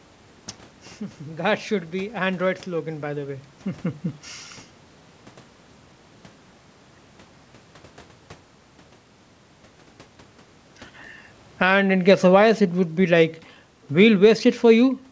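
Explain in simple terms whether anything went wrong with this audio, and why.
Something did go wrong, right near the end, in the level control rather than the recording itself. From 11.46 to 12.47 s there's automatic gain falling: the call's automatic level control decided the input was too loud or its background too strong and eased the volume down over about a second. The background noise in the room drops along with the voice, which gives it away. A person stepping back wouldn't make the room itself get quieter.

Almost immediately, from 11.71 to 12.75 s, automatic gain rising kicks in. The same control now thinks things are too quiet and pushes the level back up, so voice and background swell together again, settling just before "be like". The two adjustments overlap, so you hear a quick dip and recovery, a bit like someone nudging a volume knob down and then back up.

The change in the voice at about 3 s is different. 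That sounds like the talker shifting position, not a system problem.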